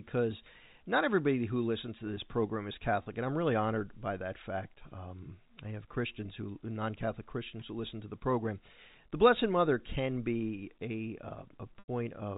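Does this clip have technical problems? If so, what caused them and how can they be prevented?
Yes. Packet loss with pitch repetition occurs at 3.03 to 3.06 s, between "to this program is" and "and I'm really honored," and again at 11.79 to 11.88 s. In each gap the receiver replays the last pitch period, so the 30 ms loss sounds like a briefly held, buzzy tone, consistent with a single lost packet. The 90 ms loss, which fits about three packets, fades toward silence before the speech cross-fades back in. The telephone-band G.711 coding is audible throughout. To prevent this, carry the call over a network link with lower loss, or add forward error correction or redundant packets.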